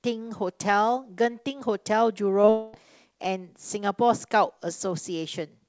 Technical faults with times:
2.42-2.49 short concealed packet loss
2.49-2.75 long network dropout

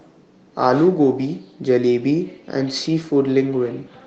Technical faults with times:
0.67-0.69 lost packet rebuilt from error correction

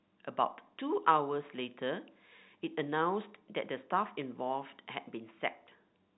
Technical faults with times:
none

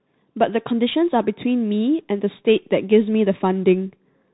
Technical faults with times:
0.00-4.33 Bluetooth CVSD headset codec

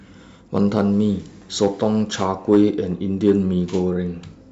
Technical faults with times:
0.57-0.81 hard clipping
1.63-1.85 hard clipping
2.22-2.64 hard clipping
3.28-3.31 hard clipping

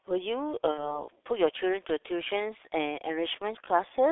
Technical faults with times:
0.00-4.12 G.723.1 codec
0.71-1.04 VoIP packet loss concealed by the speech codec

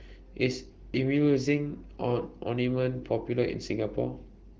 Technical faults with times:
none

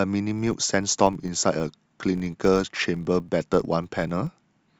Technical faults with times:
0.30-4.79 filter restarted on every block

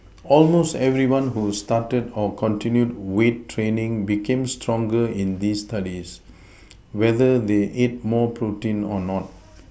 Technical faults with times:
none

